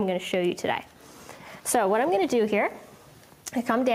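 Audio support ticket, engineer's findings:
No audible faults found; nothing to report.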